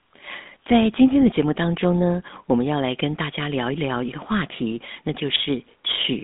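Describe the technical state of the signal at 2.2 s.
At 2.2 s, like everywhere in the clip, the speech has clear GSM full-rate codec damage. The vocal tract is modelled and driven by coarse regular pulses, which fits a 13 kbps GSM link. That gives a buzzy, gravelly grain, squeezed into roughly 200 Hz to 3.6 kHz.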